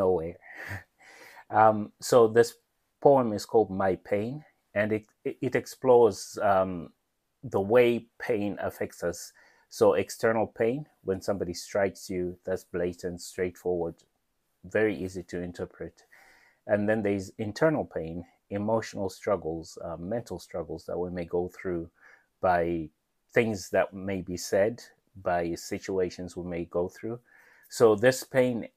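No fault shows up anywhere in the audio: levels, continuity and timing hold steady throughout, with nothing dropped, clipped or glitched.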